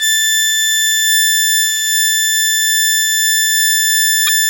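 Near the end of the music, from 4.25 to 4.29 s, there is damaged data in the compressed stream. A stretch of the encoded file is corrupt, so the decoder misreads those frames, loses sync and hunts for the next valid frame header. The result is a brief chirp, squawk, click or short hole that cuts across the music for about 40 ms. On a spectrogram it shows as a short vertical disruption unrelated to the surrounding harmonics. The waveform shows a short stretch of irregular samples.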